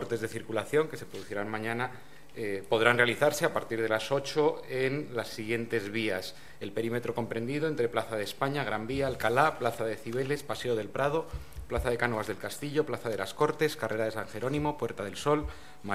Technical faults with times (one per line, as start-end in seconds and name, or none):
none